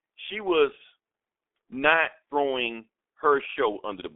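Throughout the speech, the G.723.1 codec is at work. Nothing above 3.8 kHz survives. The band runs from 250 Hz to 3.5 kHz. Its coarse, slowly updated voice model leaves speech muffled and hoarse, with blurred consonants. The heavy damage fits roughly 6 kbit/s.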